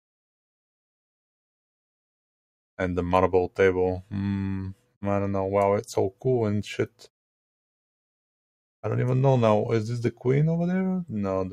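From 6.87 to 7.08 s, sound is cut by the noise suppressor, which mistook it for noise and pulled it down by about 12 dB at its deepest, for roughly 150 ms. Unlike a dropout, the sound sinks but never vanishes.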